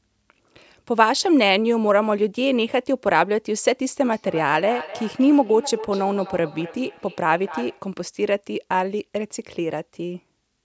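From 4.1 to 7.97 s there's feedback echo between two devices: a second device in the room replays the call, and this mic catches it again. The speech comes back about every 300 ms, thinner and ringier, peaking around 14 dB below the voice.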